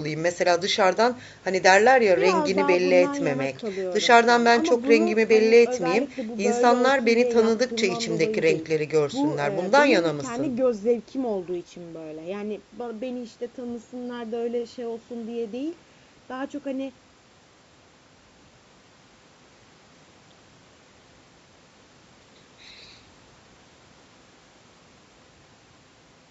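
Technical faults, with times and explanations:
Nothing stood out on listening to this speech, which carries the band-limited sound of a call microphone path with no content above 8 kHz.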